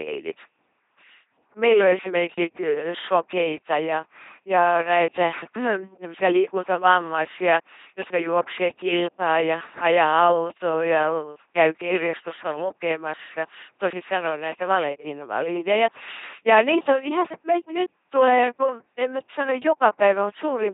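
From start to finish, the speech runs through an LPC-10 vocoder. Heavy damage results. The voice becomes a buzzing, mechanical robot sound. Each moment is rebuilt as either a pulse-driven buzz or pure noise, shaped by a small all-pole filter. Nothing of the original waveform survives. Where voicing is misjudged, buzz and hiss swap places. Nothing remains above 3.8 kHz. The coarseness fits a rate near 2.4 kbit/s.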